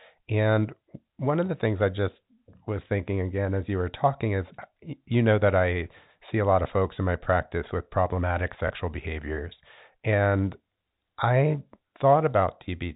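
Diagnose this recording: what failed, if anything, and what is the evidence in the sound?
Network packet loss with last packet repeated at 8.68 s: one 20 ms stretch replays, with a duplicated block visible on the waveform.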